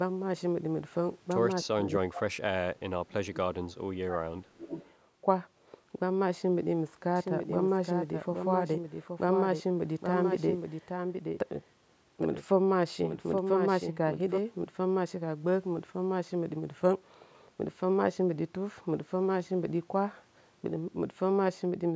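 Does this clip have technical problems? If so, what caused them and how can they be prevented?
Yes. Between 1.65 and 1.87 s, again from 2.09 to 2.24 s, and then through a longer stretch from 2.64 to 4.77 s, the talker's speech is pulled down hard, by roughly 25 dB in the first two dips and up to about 35 dB in the last. This is likely speech suppressed in double talk: with both ends talking at once, the echo canceller could not tell the local talker from loudspeaker echo and attenuated everything. The result is speech that ducks and breaks up for about 2.3 seconds in all. Giving the canceller more linear cancellation headroom and using less aggressive residual suppression during double talk would prevent it.

From 4.72 to 4.9 s an echo leak is heard, likely because the far end's loudspeaker echo was not fully cancelled and its microphone sent part of it back. A faint copy of the speech returns about 311 ms late, roughly 25 dB below the voice, briefly, right where the suppression lets go. 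A headset on the far end or better echo-path convergence there would prevent it.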